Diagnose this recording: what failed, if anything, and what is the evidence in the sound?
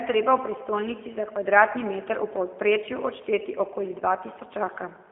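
The failure is at the codec stage: G.729 coding runs through the whole recording. The speech is band-limited to a telephone line of 250 Hz to 3.4 kHz. It has the plainly audible rough, slightly synthetic quality of a coder that rebuilds each 10 ms frame from a vocal-tract filter, a pitch predictor and a few pulses, which fits an 8 kbit/s G.729A stream. On a spectrogram, energy stops flat near 3.4 kHz, and harmonics look smeared and blocky.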